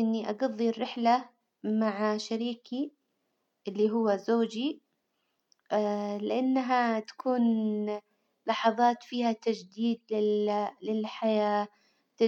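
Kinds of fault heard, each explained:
No kinds of fault are heard in this clip.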